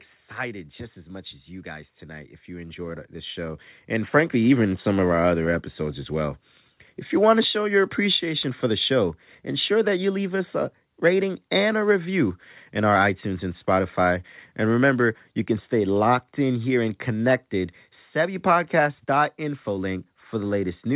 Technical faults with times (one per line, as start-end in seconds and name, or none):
0.05-0.68 automatic gain falling
1.10-4.62 automatic gain rising